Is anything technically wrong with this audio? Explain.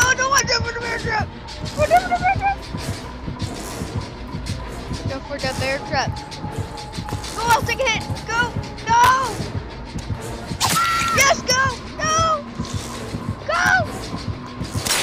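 Yes. From 0.40 to 2.29 s there is a wrong sample rate fault: the audio is clocked out slower than it was captured, with no conversion, which fits 48 kHz material played at 44.1 kHz. The sound runs at 0.919 times speed and drops 1.47 semitones, heavier and dragging.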